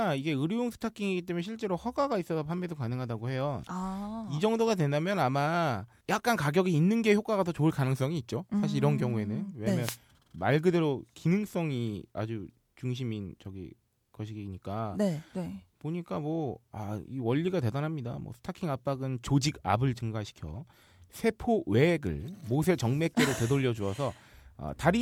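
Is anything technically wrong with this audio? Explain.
Yes. A wireless microphone noise hit occurs from 9.80 to 9.98 s, lasting about 0.18 s. The analogue FM radio link between the microphone and its receiver briefly fades as reflected signals cancel the direct one, so the receiver's own noise rises above the weakened carrier. In this speech clip, that is heard as a brief swish of static lasting under a fifth of a second.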